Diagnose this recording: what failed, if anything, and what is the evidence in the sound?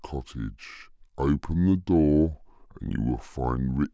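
The playback stage is running at the wrong sample rate for the whole clip. The speech comes out slow and low, at about 0.73 times normal speed with the pitch dropped roughly 5.5 semitones, and tempo and pitch sag together by the same ratio. That locked pairing is the giveaway. The samples are being clocked out slower than they went in with no resampling, which fits material captured at 22 kHz and played back at 16 kHz.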